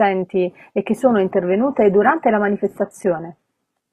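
Right after "e che sono", at 1.31 s, the speech drops abruptly to a lower-bitrate adaptive stream for the rest of the clip: treble thins, with nothing above 14.4 kHz, which fits a switch to low-rate HE-AAC.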